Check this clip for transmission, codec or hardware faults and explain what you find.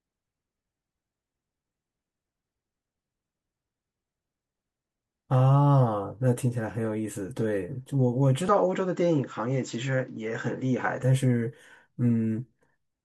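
One fault is present. From 8.49 to 11.03 s the speech turns dull and quieter, losing everything above 7.6 kHz. A faint new noise floor appears. There is no gap at either change. This likely comes from the input switching to a poorer device with a narrower band.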